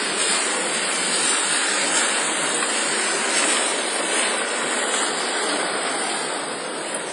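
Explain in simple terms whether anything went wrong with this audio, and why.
Something did go wrong, and it lasts the whole clip. The sound has the marks of WMA compression, likely from saving it as a small Windows Media Audio file. The damage is heavy. Everything above 10.1 kHz is missing, so the sound is dull and lacks sparkle. The encoder also threw away quiet detail. What remains rings and smears in time. A washy hiss rises and falls with the sound.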